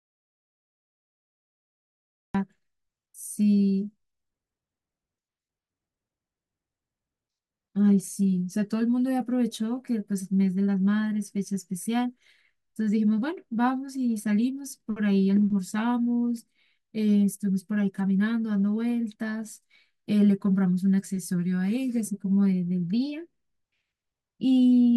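The input feed was likely lost at the very start of this speech clip, with the recorder writing silence, so the audio opens in an audio dropout to silence lasting until 2.35 s: dead, room-tone-free silence before the speech cuts in mid-flow, anything said earlier missing.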